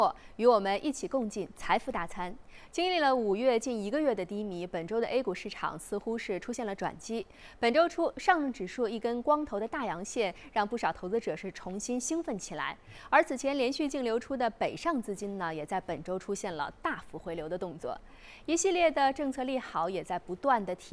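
No technical faults can be heard anywhere in this recording.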